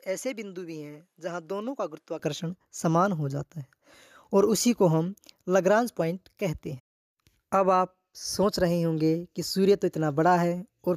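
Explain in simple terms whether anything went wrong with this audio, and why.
For the first 2.19 seconds, the sound is noticeably quieter and a bit duller, missing the airy top end above 13 kHz, with a faint hiss underneath. Then it clears up with no gap. That points to an input switched to a poorer device, likely a weaker microphone.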